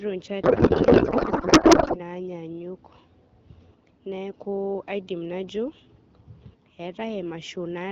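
From 0.43 to 2.0 s a codec payload misread turns the speech into garbled, warbling noise that barely follows it. This fits octet-aligned AMR frames unpacked as bandwidth-efficient. On a spectrogram, harmonics give way to smeared noise, and the waveform loses its syllable envelope.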